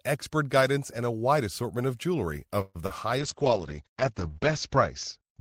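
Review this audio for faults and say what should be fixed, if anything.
At 2.61 to 2.79 s the speech stretches into a held, fading buzz for about 135 ms and then resumes where it left off, with nothing lost. This is likely a call audio freeze: delayed packets drained the jitter buffer. Give the jitter buffer more headroom so it can absorb short network stalls.

At 2.86 to 2.92 s a brief smear replaces about 40 ms of speech. This is short concealed packet loss: that audio missed the decoder, which continued the previous sound to fill the gap. Add forward error correction or redundancy to recover lost packets.

From 3.20 s to the end the speech turns rough and muffled. This is a call bitrate drop: the encoder fell from 32 to 8 kbps, and bandwidth narrowed from 20 kHz to 8 kHz, holding at its lowest for 1.08 s. Make bandwidth estimation recover faster so bitrate is not cut so deeply.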